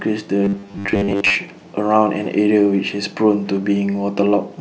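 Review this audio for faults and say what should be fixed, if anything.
From 0.44 to 1.35 s the speech turns into a rigid, metallic buzz at 100 Hz. This is robotic sound from repeated short buffers. The likely cause is late audio being covered by replaying a 10 ms block for most of that span. To prevent it, deliver audio on time with a larger jitter buffer or decoding margin.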